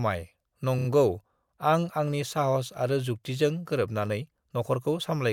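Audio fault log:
0.78–0.87 s, repeated frames: compressed frames were delivered twice and replayed, fitting three 30 ms frames, so the sound stutters and runs 90 ms longer.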